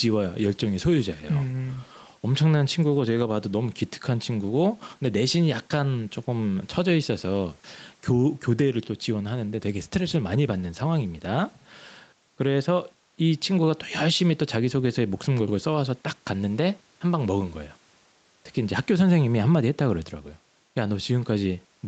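Throughout the speech, gain pumping: the gain swings by roughly 5 dB, bringing loud and soft parts closer in level and squashing the sound. Likely overdriven input gain triggering a fast limiter.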